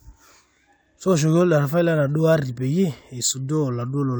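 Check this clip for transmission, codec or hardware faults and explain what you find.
Nothing in the speech signal points to a transmission, codec or hardware problem; the audio runs continuously throughout.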